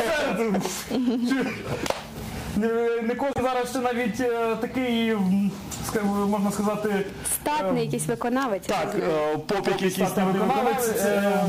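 At 3.33 to 3.40 s, the audio skips ahead with a brief chirp, burst of noise or gap. This is likely a broken MP3 bit reservoir, where missing frames leave the following ones decoding the wrong data.

From 9.62 s to the end, the whole sound repeats about 150 ms later at nearly equal level. It has a flat echo with no room tail. This is likely a doubled audio track.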